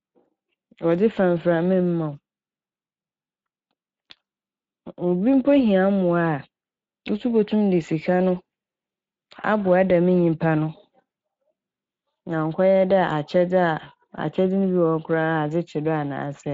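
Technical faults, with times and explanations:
Throughout, Speex codec: the speech carries plainly audible coding damage, a grainy, hoarse roughness, and the sound points to a bitrate around 20 kbps. Speex is a CELP coder. It rebuilds speech from a vocal-tract filter driven by an excitation signal drawn from codebooks. At this rate the excitation is only coarsely matched to the original, so the leftover error surfaces as that rasp and fuzz rather than clean tone.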